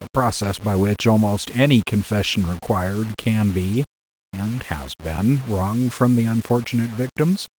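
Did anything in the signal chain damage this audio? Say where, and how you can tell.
Yes. Grainy distortion that follows the speech runs throughout, about 20 dB below it. It likely comes from sample-format conversion rounding to 6 bits without dither.

Short rough, noisy patches at 0.43–0.45 s and 3.73–3.75 s, with no gap, point to the network: a lost packet rebuilt from error correction, replayed from a low-bitrate copy.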